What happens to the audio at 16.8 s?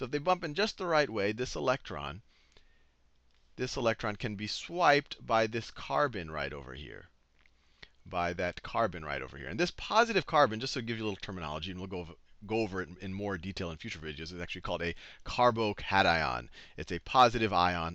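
A buzz at 50 Hz runs through 16.8 s, as it does across the whole recording: the resampler restarted on every block. The sample-rate conversion, which fits a 44.1 kHz to 48 kHz change, was applied to 20 ms blocks independently, so each block's edges were computed without the true neighbouring samples. The small error left at every boundary repeats 50 times per second and is heard as a buzz riding on the sound, present only while there is signal.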